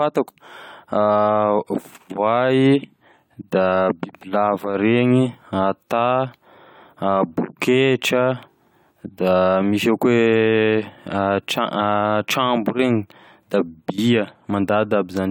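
Generation loss affects the whole speech clip, which sounds swirly, hollow and smeared, likely from about three AAC-LC re-encodes. A spectrogram would show scattered spectral holes and blurred onsets.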